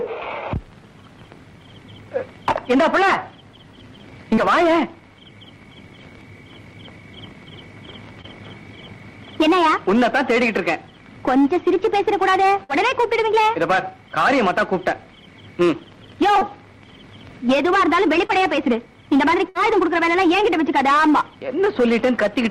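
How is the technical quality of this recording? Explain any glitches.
The recording has six network dropouts of two kinds.

Short concealed packet loss occurs at 4.35–4.39, 8.21–8.26, 16.39–16.43 and 18.27–18.31 s. Each time, about 20 ms of audio arrived too late. The receiver extrapolated 18–25 ms from the preceding sound, leaving a brief smear or wobble.

A burst of packet loss occurs at 12.64–12.71 and 19.49–19.57 s. About 60 ms went missing, and the decoder filled 50–60 ms with a fading continuation of the last sound, heard as a held buzz or hiss before the audio skips ahead.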